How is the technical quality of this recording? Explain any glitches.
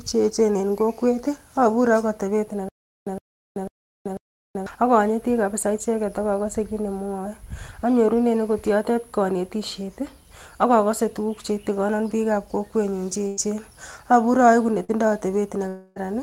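Several network and playback glitches affect the second half of the speech, and a stutter disrupts the opening seconds.

From 2.69 to 4.67 s there is a stutter with silent gaps. A 114 ms fragment plays four times at a steady 495 ms period, each time followed by 381 ms of digital silence. The likely cause is a stalled player replaying its last buffer. A waveform shows identical blocks separated by flat silent stretches.

From 13.27 to 13.40 s a burst of packet loss removes about 100 ms of audio. The receiver extends the last sound for 96 ms while fading it, producing a held buzz or hiss before speech resumes further on. On a spectrogram this appears as smeared, decaying harmonics with a jump at the join.

At 13.37, 14.88 and 15.96 s a lost packet is rebuilt from error correction. Each is a 20 ms frame decoded from the low-bitrate copy carried in the next packet. These frames sound rougher and noisier, and each shows on a spectrogram as a brief noisy patch.

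From 14.84 to 14.91 s a short concealed packet loss leaves a 40 ms hole. It is filled with 42 ms synthesised from the preceding sound, so it is heard as a quick smear or wobble. A spectrogram shows a short stretch of continued sound blending back in.

From 15.68 to 15.99 s there is a long network dropout of about 280 ms, likely from a break in delivery. The gap is concealed across its full length by a fading continuation, with no true silence. A spectrogram shows the last spectrum stretched out and dimming until real speech returns.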